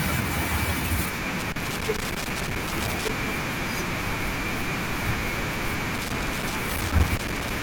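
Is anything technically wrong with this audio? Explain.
Yes. Loose connector crackle cuts into the speech from 1.39 to 3.09 s and again from 5.95 to 7.51 s. A worn or dirty contact keeps making and breaking, chopping the signal into irregular scratchy bursts. Unlike clipping, the crackle doesn't follow the speech's loudness.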